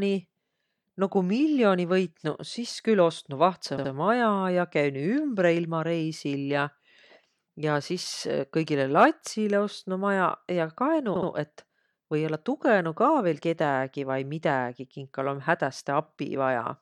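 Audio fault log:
3.76–3.90 s and 11.15–11.29 s, repeated frames: a block of about 70 ms, consistent with three compressed frames, plays twice more, adding 139 ms at each spot. Unlike a dropout, nothing goes missing. The identical sound stutters.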